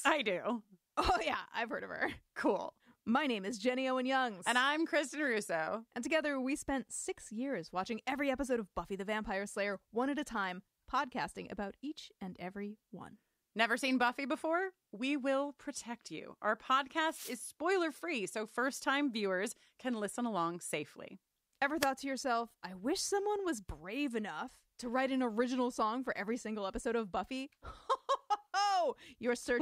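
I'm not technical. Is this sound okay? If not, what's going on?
No. The speech has two wireless microphone noise hits. From 17.05 to 17.39 s, a burst of static is heard just before "spoiler free so first". A shorter swish follows from 21.79 to 21.87 s, just before "to yourself I wish". Each time, the radio signal from the microphone to its receiver briefly faded. The receiver's own hiss rushed in to fill the gap until the signal recovered.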